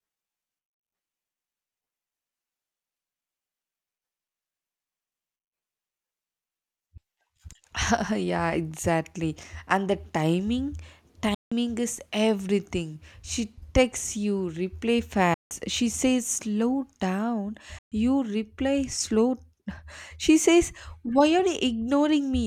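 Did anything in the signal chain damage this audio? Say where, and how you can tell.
Yes. The speech drops to silence three times: 11.35 to 11.52 s and 15.34 to 15.51 s, each 168 ms, and 17.79 to 17.92 s, about 131 ms. Each gap has abrupt or briefly faded edges, and the speech resumes further along, as though it had kept playing unheard. That points to the wireless playback link, likely a Bluetooth dropout, with runs of packets missing their delivery deadline. A buffer underrun would pause and then continue from where it stopped, and a codec's loss concealment would fill the gap with smeared or repeated sound rather than silence.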